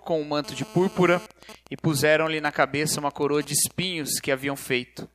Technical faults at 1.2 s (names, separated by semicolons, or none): GSM phone buzz